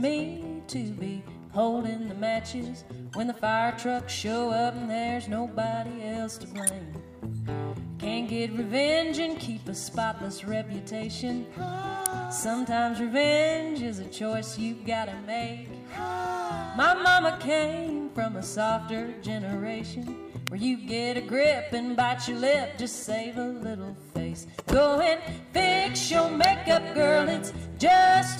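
Four sharp snaps land on top of the sound at 6.67, 12.06, 20.47 and 26.44 s, the first a bit quieter than the other three. They're electrical switching spikes, likely a nearby switch, motor or static discharge arcing briefly into the audio line.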